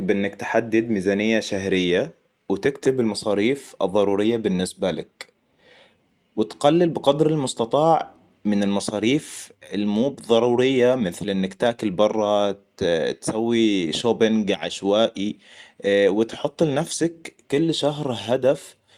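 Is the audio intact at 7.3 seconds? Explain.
Yes, the speech at 7.3 seconds plays through cleanly, with no dropout, click, distortion or other fault to be heard at that moment.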